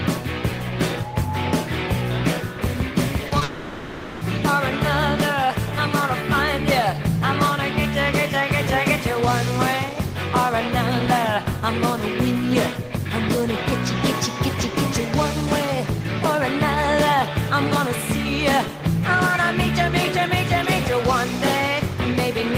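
Short concealed packet loss occurs twice. Around 40 ms of data missed the decoder between 3.27 and 3.33 s, and another 20 ms at 3.39 s. Each gap was patched by extending the preceding sound, which is heard as a brief smear or wobble.

From 3.43 to 4.23 s, about 780 ms of audio is replaced by a continuation of the last sound as a buzz or hiss that fades without going silent. This is likely a long network dropout, and the sound resumes at 4.23 s with that stretch missing.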